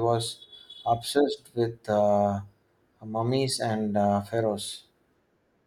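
No technical faults can be heard in the speech here. Nothing in the recording calls for comment at any point along its length.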